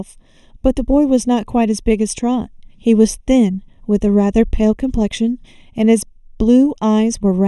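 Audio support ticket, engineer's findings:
Channel delay (comb filtering), present throughout the clip. Symptom: hollow, phasey speech with fixed spectral notches. First notch around 1.5 kHz, further notches repeating roughly every 3 kHz above. Mechanism: one channel lagging by roughly 0.3 ms, then both summed to mono, so shared content cancels at evenly spaced frequencies. Probable component: stereo-to-mono downmix stage, or a channel path adding a few samples of latency.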